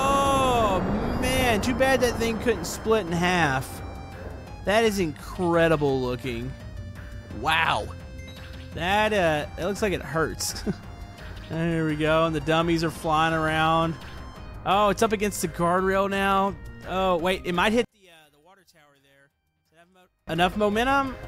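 From 17.85 s to 20.28 s the sound drops sharply, by about 32 dB, and turns faint and distant, with the centred content almost gone. This behaviour points to one channel inverted, likely a polarity flip on one side of the stereo pair. When the two sides are summed to mono, the material they share cancels, leaving only the faint difference between them for that stretch.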